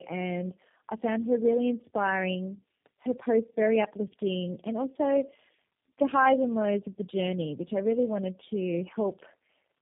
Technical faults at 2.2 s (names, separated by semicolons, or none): tandem speech coding